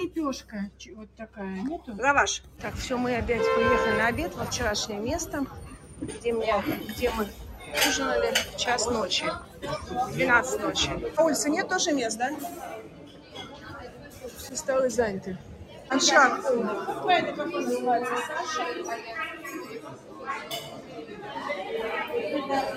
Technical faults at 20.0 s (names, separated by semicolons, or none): noise suppressor applied to music or sounds; sound cut by the noise suppressor